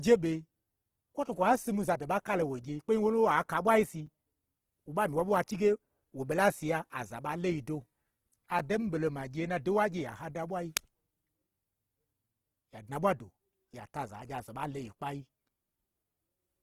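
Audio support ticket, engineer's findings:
Opus compression, whole clip: speech sounds rough and grainy, tones turned noisy, plainly audible. Likely a low-rate Opus encode in its CELT music mode, roughly 16 kbps, keeping band energies but filling starved bands with folded or noise content instead of real detail.

Block of digital silence at 4.06 s and 8.59 s: each a hard dropout of about 6 ms, heard as a tick. Output buffer probably wasn't filled in time, so zeros went out with no fade.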